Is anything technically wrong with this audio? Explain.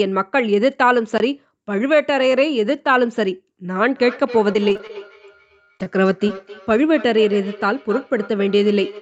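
Yes. At 1.18 s the sound drops out for 20 ms and comes back, a block of digital silence: a run of samples was zeroed, which fits an output buffer that was not filled in time, and the audio switches to and from zero with no fade. At that length it registers as a short hole.

From 3.88 s to the end, every phrase returns about 300 ms later, thinner and more ringing, at its loudest about 17 dB below the speech. This is feedback echo between two devices: a second device in the same room plays back what the first microphone sent, that microphone picks it up again, and neither echo canceller removes the other device's output, so the sound keeps cycling at that interval.

Between 4.53 and 4.97 s the sound turns choppy, with pieces missing. This is repeated packet loss producing robotic sound. Six gaps arrive close together, the longest 23 ms, and each is patched by continuing the previous sound, so roughly a quarter of that stretch is synthetic fill and about 80 ms of real audio is lost.

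From 5.65 to 5.69 s one sound is held slightly too long, a short stall from a late packet. The jitter buffer ran dry, and the receiver stretched the last sound by 26 ms until the packet arrived. It then resumed from the same point, so nothing is missing, but the timing slips by that amount.

Brief smears follow at 5.77 to 5.82 s, 5.84 to 5.88 s and 6.28 to 6.31 s, each a short concealed packet loss. About 20 ms of audio failed to reach the decoder in time each time, and the receiver filled the hole by extending the preceding sound, voiced or noise-like, then blended back into the real signal.

The call path's Opus coding and 8 kHz bandwidth, and the microphone processing's bass cut, are working as designed.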